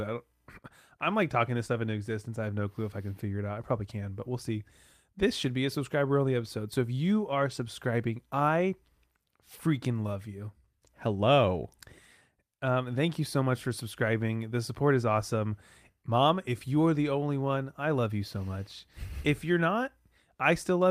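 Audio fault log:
No faults can be heard anywhere in this clip.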